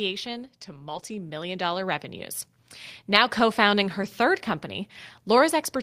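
From 0.65 to 2.12 s, automatic gain rising lifts the level by about 7 dB as the control reacts to quiet input, swelling voice and background together. Lost packets rebuilt from error correction appear at 0.89–1.03 s, at 3.09–3.15 s before "co founding", and at 4.01–4.07 s after "co founding". The decoder filled these gaps with low-bitrate copies, leaving short, rougher, noisier stretches rather than silence.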